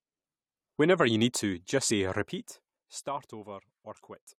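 At 1.89 s the compressed speech stream carries damaged data: a short run of bytes in the encoded stream is wrong, so the decoder cannot parse the frame there, loses its place and has to hunt forward for the next valid frame header before it can resume. That brief failure is heard as a quick chirp or blip lasting only a fraction of a syllable.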